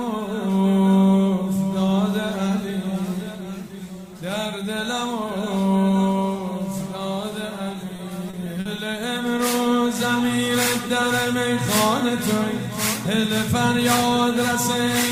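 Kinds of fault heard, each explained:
Repeated packet loss (robotic sound): the stream kept losing or receiving late packets between 7.73 and 8.93 s, leaving a run of short holes, the longest about 50 ms. Each hole was papered over by stretching the sound just before it, about 160 ms of patching in all and about 13% of that stretch. The audio turns choppy there, with a stuttering quality as fragments drop out in quick succession.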